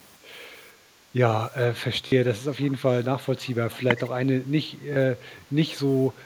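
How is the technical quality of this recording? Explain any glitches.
The recording carries three kinds of glitch: a brief dip in the room sound, two short stutters, and two faint delayed repeats of the speech.

From 0.73 to 1.11 s the room background sinks by about 6 dB for under half a second, then comes back. This is background gated by the echo canceller: while the far-end loudspeaker played, the canceller pulled the microphone down, taking the ambience with it.

At 2.08 s and again at 4.93 s there is a quick buzzing repeat lasting 43.5 ms and 29 ms respectively. This is Bluetooth stutter: packets arrived late or not at all, about three and then two by the sound of it, and the receiver replayed its last slice until data resumed.

Between 2.43 and 2.72 s, and again from 3.72 to 3.80 s, a faint copy of the speech trails the original by about half a second, roughly 25 dB down. The likely cause is an echo leak, where a loudspeaker's output reached its microphone and the canceller let a remnant through.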